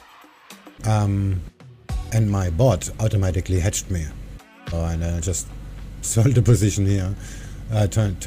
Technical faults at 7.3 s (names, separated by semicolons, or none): none